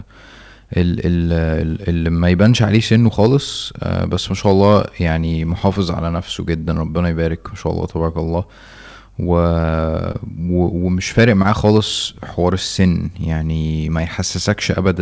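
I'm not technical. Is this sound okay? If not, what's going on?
No, it's not quite okay. There are three kinds of problem in this speech clip.

The first is hard clipping. From 2.32 to 3.35 s and again from 4.46 to 4.79 s, the speech was louder than the recording chain could handle, so the tops of the loudest moments got sliced off flat. You hear that as a rough, crackly edge on the louder bits. It's worst from 11.18 to 11.78 s, where the overload is heavier and the fuzz is easier to notice.

Then there's a short stall from a late packet at about 9.62 s. The call sends audio in small chunks, and one showed up late. While waiting, the receiving end held the last bit of sound for about 24 ms, then carried on from where it left off. Nothing is lost, but there's a tiny stretched moment that can sound like a slight buzz or hiccup.

Finally, there are two spots of short concealed packet loss, at 10.12 to 10.16 s and at 11.42 to 11.46 s. 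Here about 20 ms of audio never arrived at all, so the receiver guessed and filled the gap by continuing the sound just before it. That leaves a brief smear or wobble, and a quick consonant could drop out. The second one lands inside that last clipped stretch, so the two problems pile up there.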